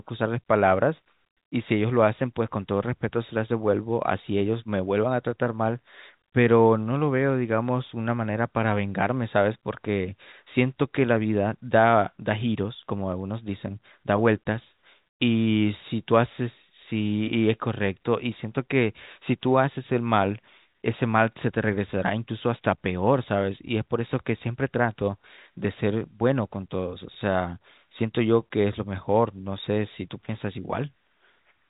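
Speech over a telephone line, with nothing wrong to report.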